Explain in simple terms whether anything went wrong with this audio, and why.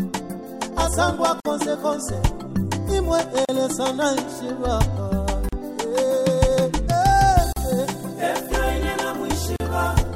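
Something did go wrong: brief silences at 1.40, 3.45, 5.49, 7.53 and 9.56 s, roughly every two seconds. That's a gap at a join of encoded pieces. The chunks were encoded separately and stitched together with their silent padding left in, so the sound drops out for about 38 ms (49 ms the first time), then resumes where it stopped.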